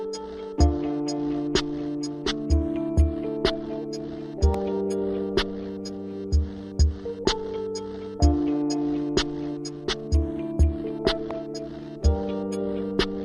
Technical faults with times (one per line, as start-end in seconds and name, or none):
4.54-4.56 loud pop
11.31-11.33 loud pop